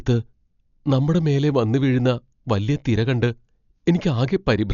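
A speech clip, dull throughout, with nothing above 7 kHz and rough, fluttering noise around tonal parts. Heavy Dolby Digital compression at a low bitrate, around 48 kbps, is the likely cause.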